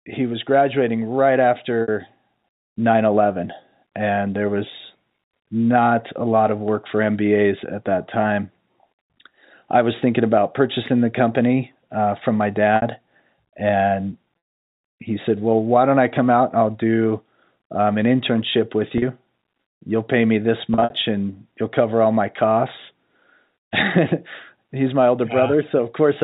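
Packet loss with pitch repetition occurs at 1.82 s and 12.76 s (60 ms each), at 14.38 to 14.68 s (300 ms, ending before "he said"), at 18.98 s (40 ms, after "um an internship with"), and at 20.74 to 20.90 s (about 120 ms scattered, between "pay me this" and "and you'll cover all"). The receiver loops the last pitch cycle, so short gaps sound like a held, buzzy tone. The 300 ms gap fades to silence before the speech cross-fades back, all over the narrowband G.711 telephone sound.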